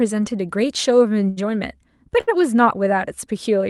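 At 1.29 to 1.39 s, and again at 2.21 to 2.29 s, there is a short stall from a late packet. The jitter buffer ran dry, so the last sound was stretched for about 73 ms, then 67 ms. Nothing is lost. The sound just hangs briefly with a slight buzz or dip.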